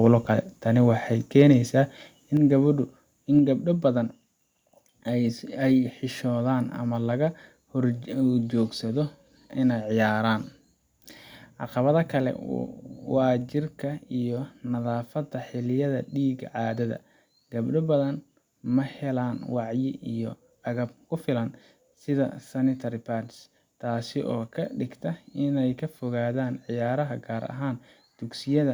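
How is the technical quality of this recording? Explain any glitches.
Two glitches stand out, both within the first few seconds.

From 1.40 to 1.42 s there is microphone overload: the input gain was likely set too high, driving the loudest peak about 1 dB past the converter's ceiling. A small share of the waveform is flattened, giving that syllable a brief harsh, crackly edge.

At 2.37 s the microphone volume is stepped down: the call software apparently reacted to the overload by cutting the device's input gain in one move. Voice and background together drop suddenly by about 5 dB and stay quieter afterwards.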